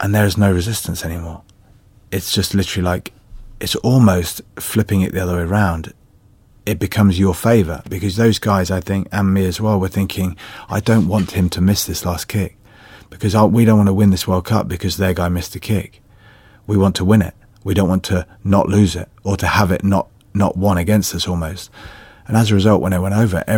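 A nearby switch, motor or static discharge likely arced twice, and the audio line picked up each burst as an electrical switching spike in this speech recording. The result is a sharp snap, peaking around -20 dBFS, at 7.86 s after "becomes your favour" and at 20.65 s after "have it not not".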